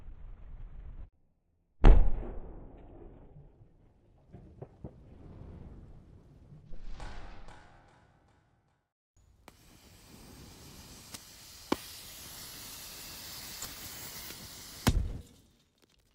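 Corrupt frame decoded at 11.12 to 11.16 s and again at 13.62 to 13.65 s: each time, damaged bits in a couple of compressed frames were played anyway, misplacing energy in frequency for about 36 ms, an artefact peaking around -25 dBFS.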